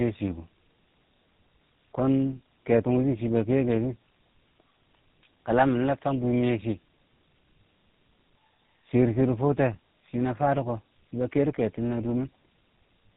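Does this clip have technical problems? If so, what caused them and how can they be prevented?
Yes. Tandem speech coding runs through the whole clip. The call appears to have crossed an AMR-NB link at 7.4 kbit/s, then G.711, then GSM full rate, so two low-rate speech coders each compressed already damaged audio. The speech sounds rough, muffled and warbly, with nothing above 3.8 kHz. Transcoder-free operation, which passes the coded speech between networks without decoding it, prevents this.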